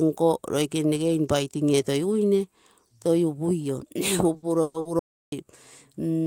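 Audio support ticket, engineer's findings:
Repeated stalls (stutter), 4.33–4.87 s. Four gaps, 240 ms filled, longest 120 ms, nearly half the span. Jitter buffer underrun; receiver extends the last sound. Nothing lost, but speech drags.

Audio dropout to silence, 4.99–5.32 s. About 330 ms of silence, no room tone. Input likely lost or muted while the encoder kept writing zeros. Content gone.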